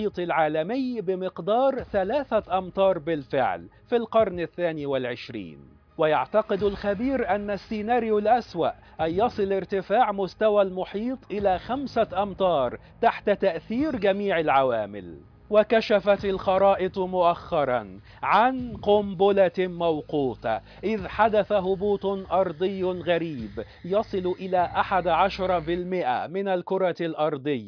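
No technical faults can be heard anywhere in the recording. Nothing in the audio calls for a timestamp or a repair note.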